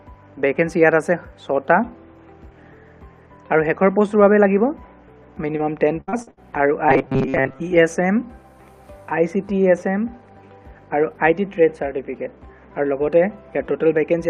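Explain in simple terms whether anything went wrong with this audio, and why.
Between 6.01 and 6.39 s, repeated packet loss hit the stream: audio kept going missing, and each hole, the longest about 66 ms, was patched over, so about half that stretch sounds choppy and robotic. From 6.89 to 7.60 s there is robotic sound from repeated short buffers, likely caused by audio arriving too seldom, so a tiny piece of about 7.5 ms kept being replayed. That puts a rigid metallic buzz near 134 Hz over most of that stretch.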